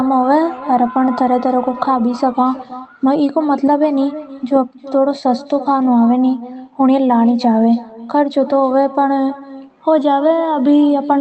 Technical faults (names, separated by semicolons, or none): echo with no canceller